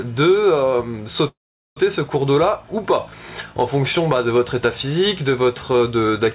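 From 1.28 to 1.78 s, within a call-band signal cut off at 4 kHz (consistent with G.711 mu-law at 64 kbps), a call audio freeze occurs, likely from packets held up until the jitter buffer emptied. The last sound briefly continues, then about 0.43 s of silence follows. Unlike a dropout, nothing is lost: the audio resumes exactly where it stopped, about half a second late.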